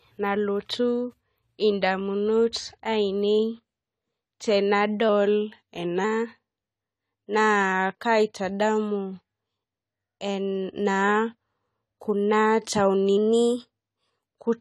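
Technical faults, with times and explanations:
Throughout, AAC compression: the speech sounds dull and smeared, with nothing above 14 kHz and plainly audible codec damage, a fizzy, warbling edge on sibilants. This is likely low-bitrate AAC-LC at around 32 kbps, where quantising against a hearing model starves the upper band.
5.09 to 6.04 s and 13.17 to 14.10 s, drift correction step: playback first slows by 6.1% and drops 109 cents, then later speeds up by 6.1% and rises 103 cents, each time snapping back after under a second. The likely cause is clock-matching software jumping its rate to rebalance a buffer.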